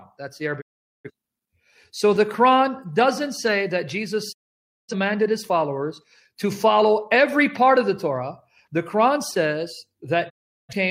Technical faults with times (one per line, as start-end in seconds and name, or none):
0.60-1.10 digital broadcast dropout
4.31-4.94 digital broadcast dropout
10.28-10.74 digital broadcast dropout